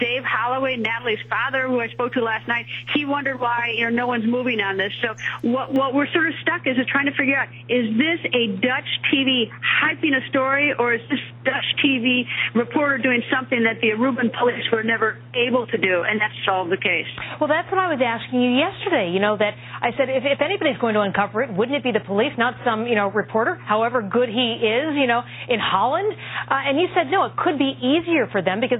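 At 5.76 s the sound turns dull and boxy, with nothing above 3.8 kHz. A new noise floor appears, some 30 dB down. Likely an input switched to a poorer device.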